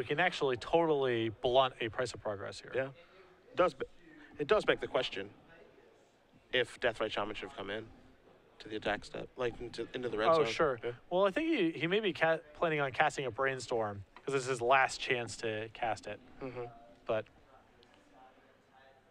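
No faults can be heard anywhere in the recording.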